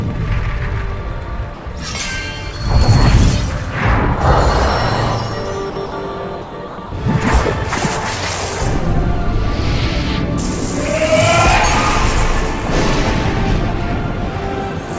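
Brief stretches where the sound gives way to flat, steady noise occur at 1.54–1.66 s, 5.70–5.76 s, 5.86–5.92 s, 6.42–6.52 s, 6.68–6.78 s and 6.86–6.92 s, each 60 to 120 ms long. This is likely sound dropped by the voice detector. The sender misjudged the audio as background and stopped transmitting, so comfort noise filled in until the detector triggered again.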